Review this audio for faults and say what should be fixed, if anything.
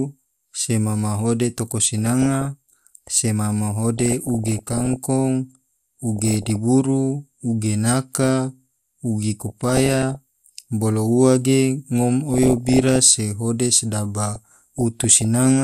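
MP2 compression runs through the whole speech clip: a dull, gurgling, granular texture, likely from MPEG Layer II coding at a low rate near 80 kbps. Starved of bits, upper sub-bands switch off and flicker while the rest are coarsely quantised. Unlike burbling, it never comes and goes. Encoding at a higher bitrate would prevent it.

DAB burbling appears in six bursts: 1.98–2.45, 3.98–4.96, 6.16–6.56, 9.35–10.16, 12.28–12.96 and 14.34–15.25 s. The burst at 3.98 s is the densest. Bit errors that get past the error correction corrupt samples and scale factors, so single sub-bands get short blips of noise or jump in level for up to a frame. This produces noise blips and level jumps that stop between bursts, whereas the codec gurgle is constant. Better reception, such as a stronger signal or a better antenna, would prevent it.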